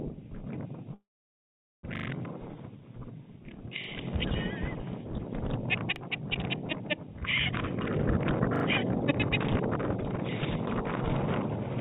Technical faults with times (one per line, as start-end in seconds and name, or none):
0.94-1.85 call audio freeze
1.96-2.08 repeated buffer
3.84-3.88 repeated buffer
5.96-6.00 repeated buffer
7.75-10.19 jitter buffer speed-up
8.56-8.64 repeated buffer